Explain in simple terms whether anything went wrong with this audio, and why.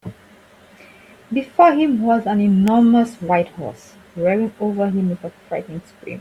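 At 2.68 s a single sharp snap cuts across the speech, very brief. That is an electrical switching spike: a burst of electrical interference, most likely from a switch, motor or static discharge near the equipment, briefly arcing and being picked up by the audio wiring. The click sits on top of the speech rather than replacing it, so the spoken sound itself carries on underneath.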